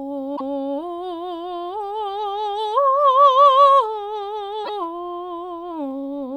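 Brief glitches break through the music from 0.33 to 0.41 s and again from 4.61 to 4.69 s: damaged data in a compressed stream, where corrupted frames derail the decoder until it resynchronises.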